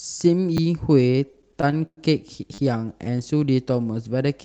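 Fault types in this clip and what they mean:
Repeated buffer: New audio arrived late, so the device replayed the piece it had just played. Each piece is 10 ms long, which fits a 10 ms playback buffer. At 0.57 s a single piece plays twice, giving a brief click. From 2.54 to 2.58 s one piece plays four extra times in a row. That gives a short buzz with a hard join at each repeat. About 40 ms of new speech is lost there.
Repeated stalls (stutter): From 1.07 to 1.99 s, packets kept arriving later than they were played, so the jitter buffer ran dry thirteen times. At each gap the receiver stretched out the last sound until fresh audio came. The longest wait lasts 111 ms and is faded. Together the fills add 258 ms, about 28 percent of that stretch. No speech goes missing, but the passage drags and stutters.
Jitter buffer slow-down: From 2.78 to 3.23 s, the receiver built up its reserve by repeating single pitch periods and bits of pauses many times over. 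This comes right after the buzz at 2.54 s. The speech plays at 90 percent of its normal speed, with the pitch unchanged. Sounds are drawn out, and a slight warble may be heard. The stretch adds 55 ms in total.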